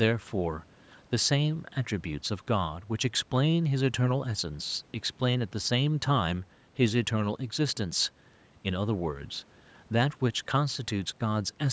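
A speech recording with no technical fault to be heard. It has passed through a call's microphone processing, which trims the lowest bass and leaves nothing above 8 kHz, as that path normally does.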